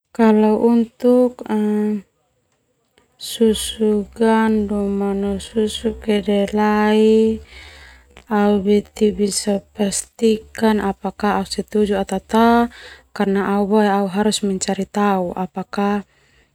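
From 3.67 s to 10.67 s there's a time-stretched section: the speech suddenly runs at about 0.54 times its normal pace with the pitch unchanged, so it drags. Likely software padded it out by repeating short slices to fill a longer slot.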